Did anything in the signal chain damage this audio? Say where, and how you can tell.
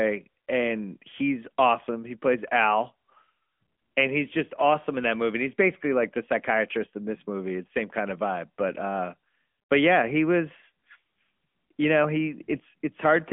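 Yes. The AMR narrowband mobile codec runs throughout. At the codec stage the speech is confined to roughly 200 Hz to 3.4 kHz, with nothing above 3.5 kHz, and has a plainly audible buzzy, synthetic edge that fits a mid-rate mode near 10 kbps.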